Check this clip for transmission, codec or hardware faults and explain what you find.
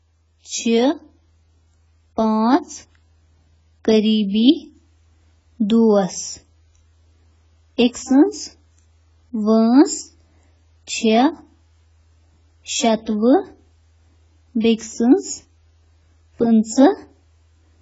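Two codec problems stand out, one running the whole way through and one showing up twice at specific moments.

The speech sounds heavily compressed from start to finish, with nothing above 7.6 kHz, so it's dull and smeared, and the sibilants have a fizzy, warbling edge. That's likely AAC compression, with damage this heavy pointing to AAC-LC at something like 16 kbps, starving the upper bands and quantising the rest coarsely.

There's pre-echo at 7.93 to 7.95 s and again at 14.78 to 14.81 s: a short hiss creeps in about 21 ms and 29 ms before sharp attacks, which then sound softened. The codec spreads its quantisation noise across a whole block, so the quiet moment before each attack picks up noise meant for the loud part.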